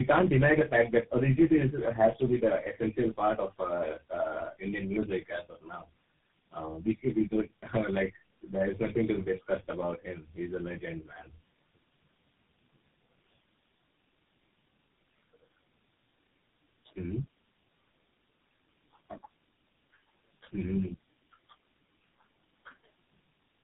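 From the start to the end, the speech carries tandem speech coding. It sounds like four speech codecs in a row, probably ending in GSM full rate, each re-coding the previous one's damaged output, so the sound turns rough, muffled and warbly. A spectrogram shows nothing above 3.8 kHz and smeared, blotchy harmonics.

From 0.00 to 1.54 s, hard clipping drives the signal about 7 dB past full scale, and the peaks are cut flat. It recurs at 2.01–2.08 s, about 5 dB over, just before "to be". The waveform shows squared-off tops, and the spectrogram shows broadband harmonic spray.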